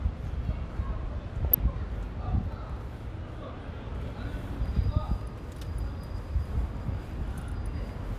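At about 1.45 to 1.55 s there's a short patch of DAB burbling. Weak reception let bit errors slip past error correction into the MP2 data, so wrong samples put short blips of noise into single sub-bands across 7 frames. It comes through as brief blips of noise over the sound.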